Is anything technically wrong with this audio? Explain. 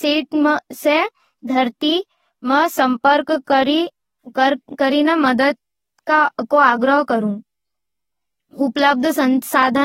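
Yes. AAC compression runs through the whole recording. The speech has a dull, smeared quality, with a watery warble on sustained vowels and a fizzy edge on sibilants, and nothing is present above 16.4 kHz. The likely cause is AAC-LC coding at a low bitrate, around 24 kbps. The encoder discarded or coarsely quantised many frequency lines in each frame and cut the top band to save data, leaving spectral holes that shift from frame to frame.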